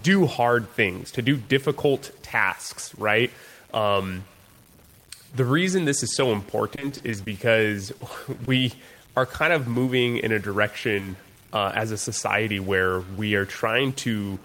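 A likely stuck bit runs through the whole clip, from start to finish. One bit of each sample appears fixed at a single value, so roughly half the samples land off by that bit's weight in a pattern that follows the waveform. This adds noise or distortion to the speech. Because the error also flips with the sign of quiet samples, the pauses are filled with noise instead of silence.

Repeated packet loss (robotic sound) sets in from 6.75 to 7.28 s, right after "reason this is so". Over that half second the stream keeps breaking up, in what sounds like six or so holes of no more than 20 ms each. About 120 ms of audio is missing and about 120 ms is patched over, nearly a quarter of the span. Each patch extends the last sound, and the next break arrives soon after, so the passage turns choppy.

Scattered short gaps follow from 7.98 to 9.06 s, ending just before "are kind of". Here the holes are spread out, perhaps four of them, each no longer than about 20 ms. 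About 60 ms is lost and roughly 70 ms is filled in, so the concealment covers only a small fraction of the stretch. The receiver bridges each gap by continuing the preceding sound, which leaves brief ticks and small smears in otherwise clear speech.

Short concealed packet loss appears twice, at 9.72–9.76 s and at 9.86–9.90 s, the second one between "are kind of" and "in a". In each case 20 ms of audio failed to reach the decoder in time. The receiver filled the hole by extending the last sound, from its pitch if it was voiced or as shaped noise if not, and then blended back into the real signal. The result is a quick smear or wobble.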